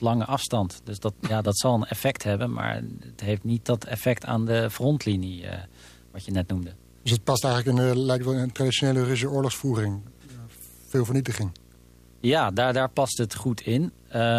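A 60 Hz buzz with hash above it lies about 30 dB under the speech throughout: video or display buzz, a screen or cable coupling in.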